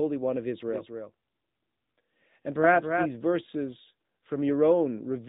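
Throughout, the speech passes through the AMR narrowband mobile codec, cutting everything above 4 kHz; the plainly buzzy, synthetic tone fits a mid-rate mode near 10 kbps.

From 0.68 to 3.16 s, a doubled audio track likely comes from a second, slower capture path, adding a copy about 5 dB quieter about a third of a second behind, starting and stopping abruptly.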